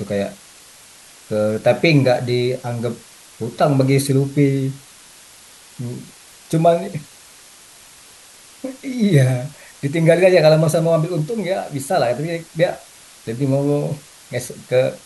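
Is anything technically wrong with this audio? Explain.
Yes. Low bit depth with dither runs throughout the speech: the signal is stored with very few amplitude steps, which fits about 7 bits, and dither randomises the rounding error, turning it into a constant, even white hiss roughly 25 dB below the speech, without distortion.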